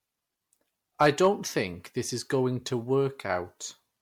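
Repeated lossy MP3 re-encoding, likely around five passes at a rate near 96 kbit/s, has left this speech clip with generation loss: smeared, swirly, hollow sound throughout and nothing above 19.9 kHz. From 1.01 to 1.27 s, just before "think this is going", a stage overdriven by about 4 dB flattens the peaks, and this hard clipping adds crackle on the peaks.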